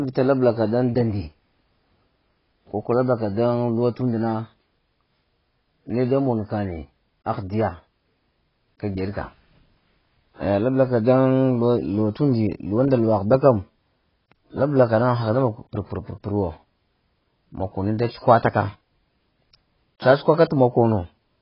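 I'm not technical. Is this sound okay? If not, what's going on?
No. The speech sounds dull and muffled all the way through, as if heard through a wall, with a swirly, watery warble on drawn-out sounds and a fizzy roughness on hissing sounds like s. Nothing is heard above about 5.5 kHz. This is likely heavy AAC compression: to shrink the file, the encoder discarded the upper frequencies and coded the rest too coarsely, so the detail is smeared.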